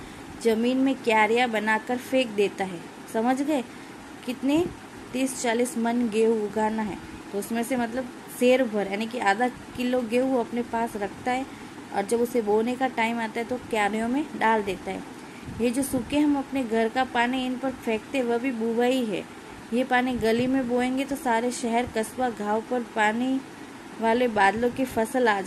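No technical faults are audible.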